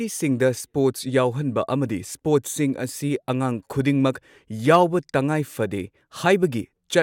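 No technical faults are audible in this speech recording.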